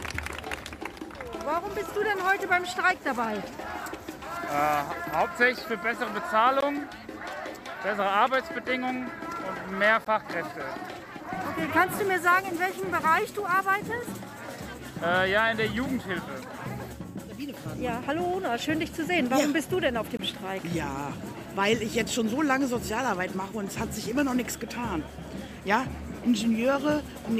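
At 6.61 s and again at 10.05 s the audio drops out in a block of digital silence lasting about 19 ms and 18 ms, and a third block runs from 20.17 to 20.19 s, about 21 ms, which fits a 1024-sample buffer. Each is a run of zeros, likely where output wasn't delivered in time. Since the signal jumps to and from zero with no fade, each gap sounds like a short hole in the sound.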